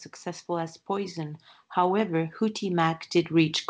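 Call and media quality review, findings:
Automatic gain rising, 0.46 s to clip end at 3.69 s. Speech and background swell together. The AGC judged the input too quiet and kept raising gain. The top of the band stops at 8 kHz, consistent with the G.722 call path.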